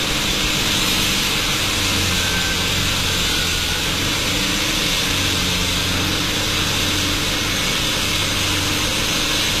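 An everyday-sound recording, likely passed through HE-AAC compression at a low rate, with audible damage from start to finish that fits a bitrate around 24 kbps. The encoder kept only the lower spectrum and rebuilt the treble by spectral band replication, copying lower bands upward under a coarse envelope. The top end sounds bright but synthetic, with hissy and sharp detail turned gritty and metallic. Nothing survives above 14.9 kHz.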